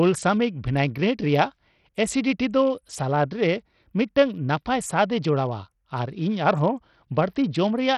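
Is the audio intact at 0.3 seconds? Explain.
No. At 0.3 s, as across the whole clip, the speech has nothing above 14.1 kHz, with flickering treble and a gritty, aliased grain. This is likely heavy Bluetooth SBC compression: a small bit pool starves the upper sub-bands and coarsely quantises the rest, which fits a bitrate near 64 kbps.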